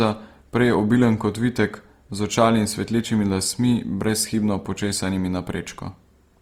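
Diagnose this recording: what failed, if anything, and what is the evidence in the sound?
Opus compression, present across the whole clip from start to end, points to a failure at the codec stage. The speech keeps its full top-end bandwidth, yet it sounds plainly rough and grainy, with a noisy texture riding on the harmonics instead of holes or swirling. The likely cause is Opus in its music (CELT) mode running short of bits, in keeping with a rate near 24 kbps. Each band's energy is preserved, but the encoder fills the starved detail by folding lower bands upward or injecting noise.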